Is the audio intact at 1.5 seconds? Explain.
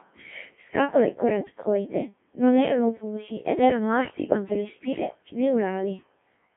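No. At 1.5 s, as across the whole clip, the speech passes through a Codec 2 vocoder, its damage heavy and consistent with a 1.3 kbit/s mode. The voice is rebuilt from sine waves using only pitch, voicing, energy and envelope, so it sounds robotic and buzzy, confined to 150 Hz to 3.4 kHz.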